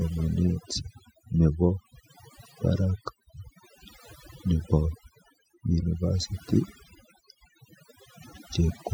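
A speech clip with overdone noise removal throughout: the background drops and breaks up into twinkling specks, and quiet parts of the voice vanish with the noise. Unlike a noise gate, the gaps aren't fully silent, and the damage is scattered across individual frequency bands rather than switching the whole signal off.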